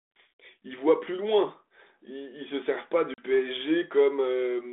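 Packet loss on an ADPCM call at 3.14 to 3.24 s: a couple of packets, about 40 ms of this 32 kbit/s G.726 speech, drop into hard-edged silence. The decoder's predictor and step size then lose sync, so speech resumes with brief, slight distortion.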